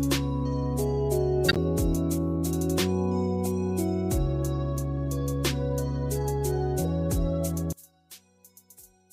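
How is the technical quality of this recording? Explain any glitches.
Two glitches stand out. From 1.48 to 1.57 s a brief burst of misplaced noise cuts in, a corrupt frame decoded: a damaged compressed stretch of about three frames played back with wrong frequency content. From 7.73 s to the end the sound drops about 27 dB, leaving only a faint residue, likely one channel inverted, cancelling shared content when summed to mono.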